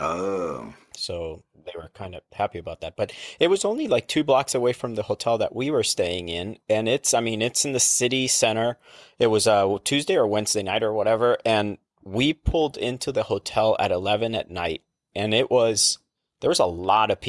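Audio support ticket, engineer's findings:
Speech signal checked across its whole duration with no technical fault found in the capture, transmission or playback path.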